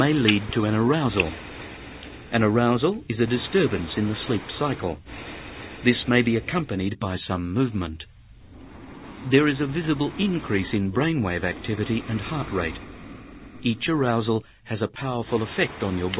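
No technical faults are audible; the signal carries the narrowband character of a telephone call path, with nothing above 4 kHz, which fits G.711 A-law coding.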